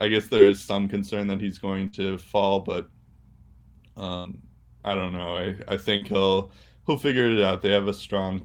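At 0.37 to 0.41 s there is short concealed packet loss. About 20 ms of the call never arrived. The receiver extended the last sound, leaving a brief smear. At 1.87 to 1.95 s, a burst of packet loss removes 60 ms. The last sound is held and faded, then the speech jumps ahead. At 4.17 to 4.27 s, another burst drops 80 ms, with the same fading hold. At 5.97 to 6.03 s, a second short concealed loss covers 40 ms and gives a quick wobble.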